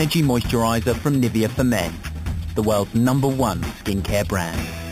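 Throughout, imaging from sample-and-hold upsampling: samples were repeated unsmoothed from 8 kHz to 48 kHz, mirroring the spectrum into 4 to 8 kHz at about 17 dB below the signal. Unlike hiss, this metallic fizz follows the sound's level and moves opposite to its pitch.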